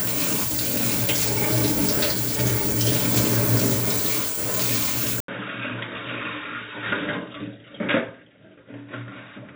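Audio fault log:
5.20–9.55 s, input switched to a poorer device: after a silence of 80 ms the sound turns dull and boxy, with nothing above 3.8 kHz, drops by around 10 dB, and carries a new, faint background noise well beneath it, staying that way to the end. The likely cause is the recording input changing mid-clip to a narrower-band microphone or headset path, which brings its own tone, level and noise floor.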